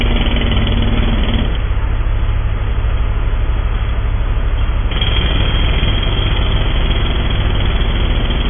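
MP3 compression runs through the whole clip: nothing survives above 3.5 kHz, so the top end is simply gone, and the remaining sound is heavily damaged. The likely cause is an MP3 encoder starved of bits, at a rate that fits roughly 16 kbps. With so little to spend, it dropped the treble at a fixed cut-off and zeroed weak frequency lines that flicker on and off between frames, giving a watery, swirling texture and smeared attacks.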